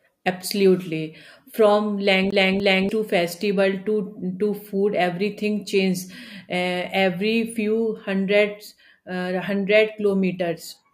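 A speech recording in which the CD gets stuck on one turn between 2.31 and 2.89 s. A scratch on the disc keeps knocking the laser back one track at the same point, so a 293 ms slice of speech plays twice in a quick, mechanical stutter with a brief mute at each jump. On a waveform the two identical segments sit side by side, separated by near-silent gaps. A spectrogram shows the same formant pattern stamped twice with thin vertical breaks between them.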